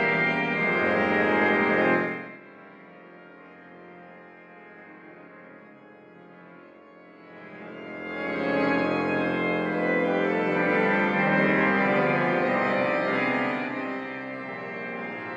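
Zipper noise at 1.94–2.4 s, 7.18–8.66 s and 13.18–14.1 s. The level moves in coarse steps at about 50 per second, with no smoothing. Each step clicks, giving a fast ticking buzz.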